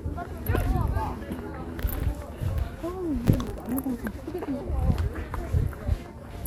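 Processor overload crackle from 3.25 to 3.71 s: the processor repeatedly missed its deadlines for short buffers, around 10 ms each, so a dozen or more were replayed as stale audio with hard edges, heard as a gritty tearing crackle.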